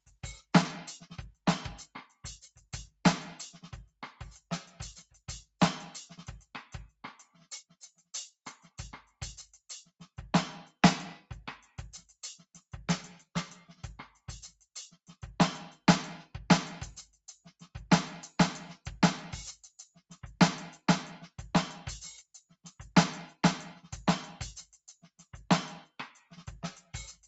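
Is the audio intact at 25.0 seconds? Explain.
No. Around 25.0 seconds the music briefly sags in level, dipping by about 6 dB at its deepest, with the affected stretch adding up to around a fifth of a second within the span from 24.73 to 25.24 s. This is sound cut by the noise suppressor: the call's noise reduction mistook part of the music for background noise and pulled it down harder than the surrounding audio, so that moment sinks in level.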